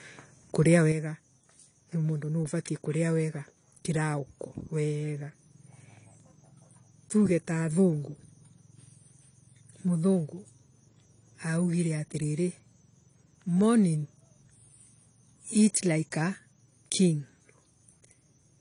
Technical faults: low-bitrate audio saved at a high bitrate; one channel drops out

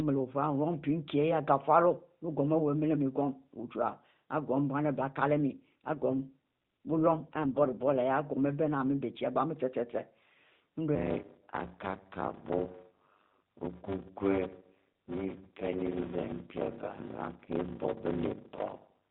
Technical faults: AMR rate drop; block size mismatch (padded)

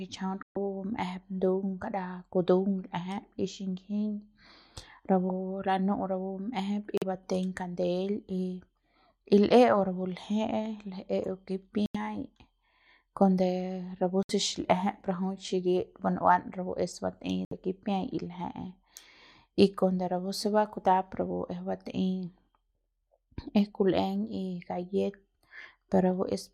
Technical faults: Bluetooth dropout

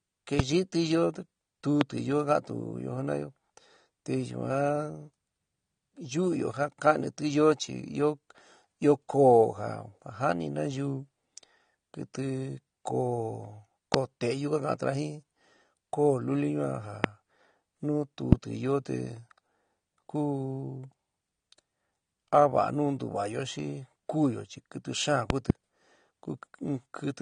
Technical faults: AAC compression; loud pop

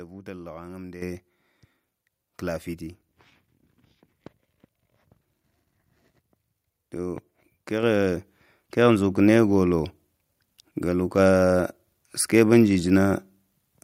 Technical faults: microphone volume stepped up

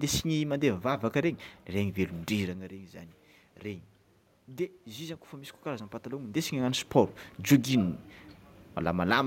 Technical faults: automatic gain rising

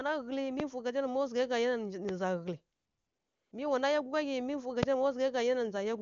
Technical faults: loud pop; AMR comfort noise

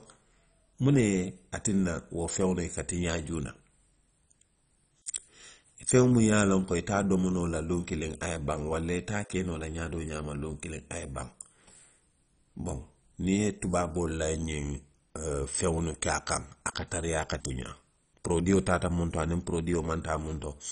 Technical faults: MP2 compression

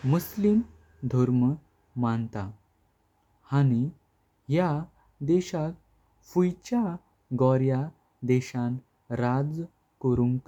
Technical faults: none

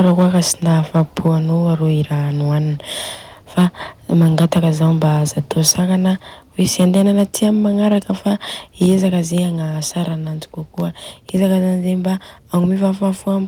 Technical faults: microphone overload; microphone volume stepped down

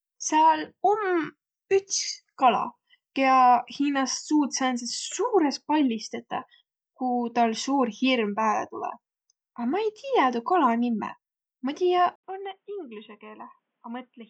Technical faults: input switched to a poorer device

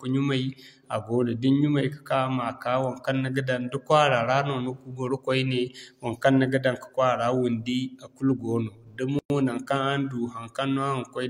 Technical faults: gap at a join of encoded pieces

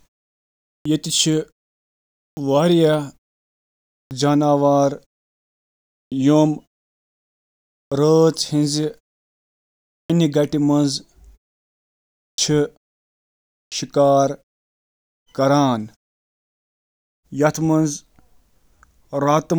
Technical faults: clipped start after a pause

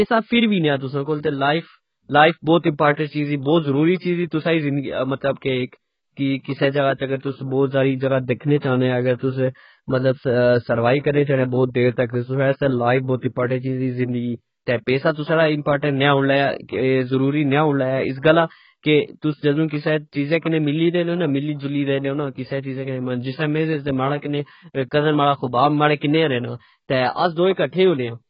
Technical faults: AAC compression; pre-echo

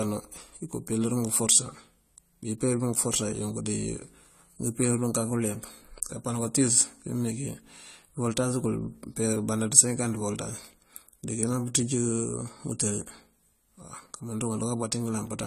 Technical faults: AAC compression

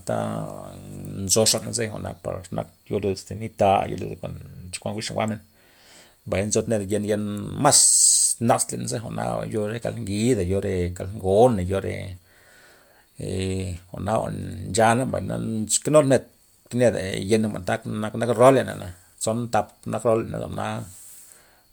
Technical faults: none

